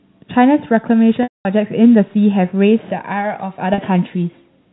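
Packet loss with pitch repetition strikes twice, from 1.23 to 1.45 s and from 3.74 to 3.78 s, over G.711 telephone-band audio. Each time the receiver filled the missing stretch by looping the last pitch period. The 40 ms gap comes across as a briefly held, buzzy tone. The 220 ms gap is too long to hold, so the repetition fades to silence before the speech cross-fades back in. The lengths fit 10 ms packets.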